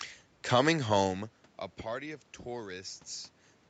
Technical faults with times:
none

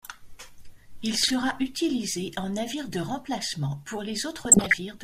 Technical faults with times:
1.16-1.31 DAB burbling
4.45-4.74 DAB burbling

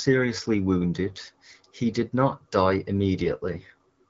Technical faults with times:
3.19-3.74 AMR rate drop

